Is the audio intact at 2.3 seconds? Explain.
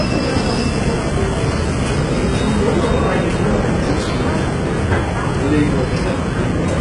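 No, at 2.3 s, as throughout, it sounds like heavy HE-AAC compression: the treble is likely rebuilt from copied lower bands, so highs sound gritty and metallic and stop by 11 kHz.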